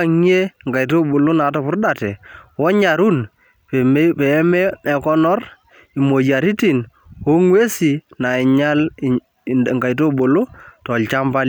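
There are no technical faults to describe in time order anywhere in the speech.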